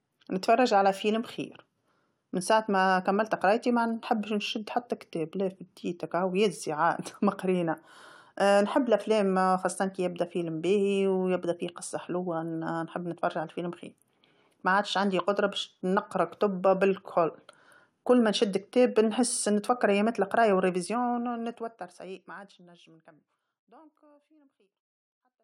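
Nothing technically wrong turns up in this speech recording; it just eases out with a smooth fade that begins somewhere around 20 s and finishes at 25.4 s.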